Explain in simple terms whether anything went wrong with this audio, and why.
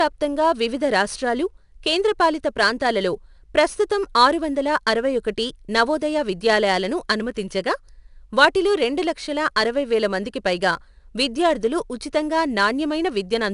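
The speech carries a gritty hiss that rises and falls with the talking, getting rougher on louder moments and on sharp starts of sounds, and the top end sounds slightly dulled. It runs all the way through. This is 4-bit ADPCM compression, which saves each sample as a small guessed step from the last one, so the leftover error turns into grainy noise. There is also nothing above about 10.6 kHz, which takes away some brightness.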